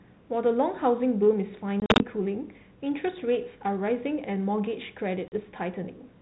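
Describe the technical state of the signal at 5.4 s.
At 5.4 s the sound is coming out of packet loss on an ADPCM call: a hard silent gap from 5.28 s, about two packets' worth, where the decoder's adaptive predictor and step size drifted from the sender's, so the return carries brief, slight distortion.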